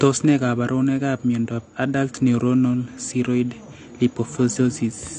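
AAC compression runs throughout the speech. Nothing is heard above 9.6 kHz, and the sound is dull and smeared, with a fizzy, warbling edge on sibilants. The likely cause is AAC-LC coding at a low bitrate, around 32 kbps, where the encoder cuts the top band and quantises the remaining spectrum coarsely.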